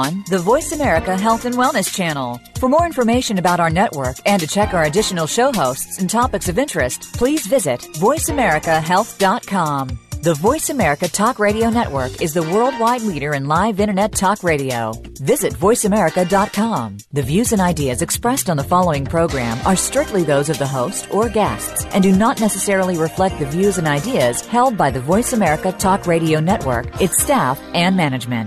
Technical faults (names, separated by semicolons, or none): none